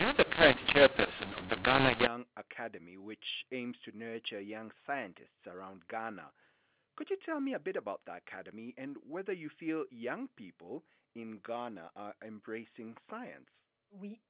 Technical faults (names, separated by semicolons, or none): mu-law and A-law mixed up